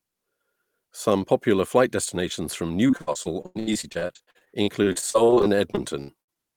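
From 2.87 to 6.38 s the speech breaks into repeated packet loss (robotic sound): dozens of short gaps up to 93 ms, each patched by extending prior audio, leaving choppy chunks.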